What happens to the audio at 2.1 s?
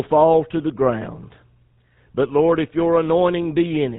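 At 2.1 s the speech has the buzzy, gravelly roughness heard across the whole clip, with a dull top end and nothing above 4 kHz. This is plainly audible GSM full-rate codec damage, and the sound fits the 13 kbps full-rate coder. It models the vocal tract as a filter and excites it with regularly spaced pulses that keep only every third sample. That coarse excitation replaces the natural voice source and produces the grainy buzz.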